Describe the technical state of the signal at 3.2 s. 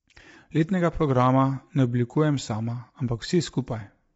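Low-delay AAC compression is present at 3.2 s, as it is throughout the clip, likely from AAC-ELD at a rate that fits about 24 kbps. Its short frames resolve pitch harmonics poorly, so the speech sounds plainly rough and grainy, with noise between harmonics and nothing above 7.7 kHz.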